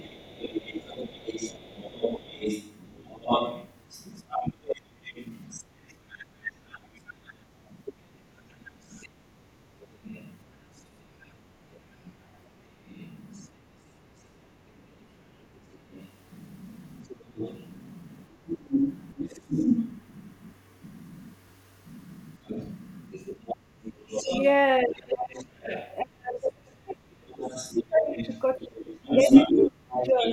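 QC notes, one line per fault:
0.00–14.05 s, 15.55–26.47 s and 27.42–30.33 s: other side's voice leaking through. A second, far-end voice sits under the talker, likely loudspeaker echo the canceller left in the microphone. It is around 15 dB down at first, nearer 10 dB in the middle run and only about 5 dB below by the end. Unlike suppression, it adds sound rather than removing any.
7.46–7.57 s: background gated by the echo canceller. The room sound briefly drops by about 11 dB for roughly a tenth of a second while the loudspeaker plays, then returns once the canceller releases.
22.42–22.47 s and 23.98–30.22 s: speech suppressed in double talk. With both sides talking at once, the talker's own voice dips, the likely result of the canceller mistaking it for echo. The first dip is a brief pinch of roughly 15 dB. The later stretch dips the voice for about three seconds in total, at times nearly 30 dB down.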